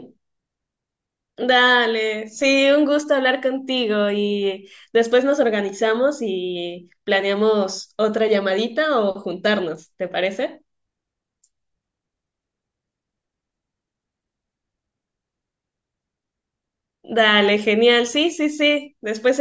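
No technical faults can be heard anywhere in the speech.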